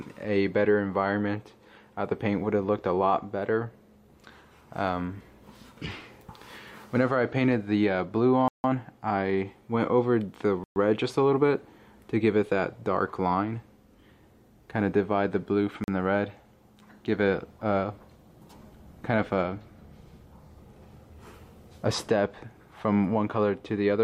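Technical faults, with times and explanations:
8.48–8.64 s, 10.64–10.76 s, 15.84–15.88 s: blocks of digital silence, 160, 120 and 40 ms holes where the sound drops out, from unfilled output buffers or invalid calculated values.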